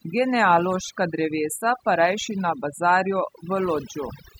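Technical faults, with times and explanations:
Throughout: overdone noise removal. The pauses between phrases drop to near silence, dotted with twinkling specks. A noise reduction stage was set far too aggressively: every frequency band that sits close to its estimate of the background noise gets pulled right down or switched off. Leftover noise survives only as isolated flickering bands, while the quieter, softer components of the voice are stripped away together with the noise.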